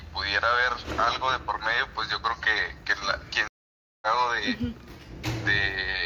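At 3.48 s the sound cuts out, and that's a stream reconnect: the connection dropped, the player went quiet for about 0.54 s, then reconnected and spun up a fresh decoder mid-stream. When it comes back at 4.06 s it has skipped ahead, landing roughly 0.7 s later than where it left off, so a chunk is simply gone, as you'd get from a live feed. The restart eases in rather than snapping back at full level.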